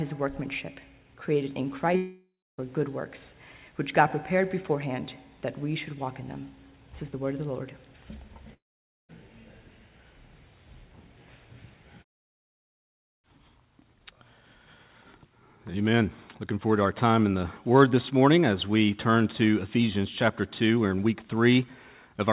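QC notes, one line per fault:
1.96–2.60 s and 8.54–9.11 s, long network dropout, likely cause: the last sound smears into a fading buzz, then silence, and audio resumes with about 0.6 s skipped, unlike brief packet-loss glitches.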